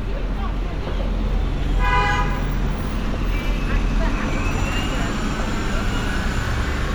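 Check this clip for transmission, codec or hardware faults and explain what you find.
No transmission, codec or hardware faults turn up in this clip.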